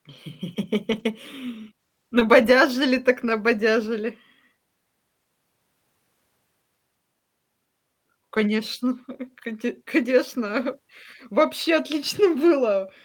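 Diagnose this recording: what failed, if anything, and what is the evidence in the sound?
Network, with recovery by the codec: lost packets were rebuilt from error correction at 0.91–1.05, 3.25–3.31, 8.39–8.41, 10.45–10.47 and 11.41–11.43 s. These rough, noisy stretches leave no gap, because the decoder played low-bitrate copies of the lost audio rather than guessing it.

Network: short concealed packet loss at 2.19–2.23 s. About 20 ms is missing. Instead of roughness, the sound smears or wobbles there, because the receiver extended the preceding sound to cover the hole.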